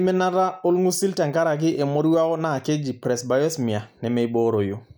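Throughout the speech, the resampler restarted on every block, converting 48 kHz to 44.1 kHz in 10 ms pieces. Each edge glitches, giving a 100 Hz buzz under the signal.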